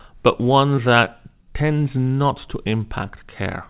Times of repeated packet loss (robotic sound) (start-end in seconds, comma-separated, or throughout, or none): 0.76-1.08